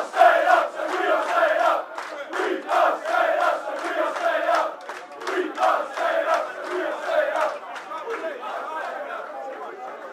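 Nothing stood out as a technical fault on listening to this clip.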